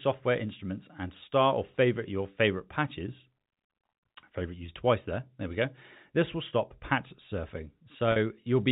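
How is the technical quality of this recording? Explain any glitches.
The recording has two brief dropouts, both packet loss with pitch repetition, heard through telephone-band audio that stops at 4 kHz, as G.711 coding does.

At 4.66 to 4.68 s, about 20 ms of audio went missing, which fits a single lost packet. The receiver filled the hole by repeating the last pitch period, so the sound holds briefly with a faint buzzy quality. At 8.12 to 8.16 s, a 40 ms gap, which points to two packets, is bridged the same way. The repeated cycle fades out over its length before the speech cross-fades back in.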